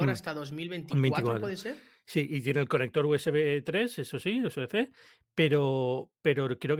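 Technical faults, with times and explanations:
3.41 s, lost packet rebuilt from error correction: a brief, rough, noisy 20 ms patch with no gap, because the decoder played a low-bitrate copy of the lost packet carried in the next one.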